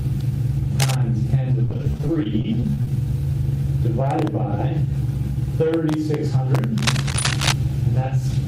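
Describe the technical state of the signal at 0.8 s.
At 0.8 s the signal carries cable scratch noise, running from 0.79 to 0.95 s and sitting only about 5 dB below the sound. It is heard as a brief scratching, rustling burst laid over the audio, likely from a worn cable, connector or control whose contact resistance jumps around as it moves. On a waveform it shows as ragged, uneven spikes riding on the signal; a spectrogram shows dense, broadband vertical streaks across that span.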